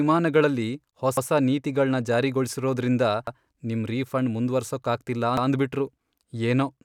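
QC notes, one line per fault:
1.17–1.27 s, 3.27–3.37 s, 5.37–5.47 s: overlapping chunks. The speech was processed in 2.0 s chunks, and each new chunk begins 100 ms before the previous one finished, so the tail of one block is played again at the head of the next. At each join, 100 ms of speech is heard twice, producing a brief stutter at the seam. These stutters recur at a steady spacing of about 2.1 s.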